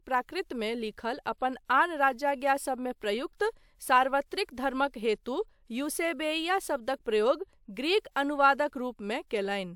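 No technical faults can be heard anywhere in the speech. There is nothing in the recording that needs a time marked or a problem described.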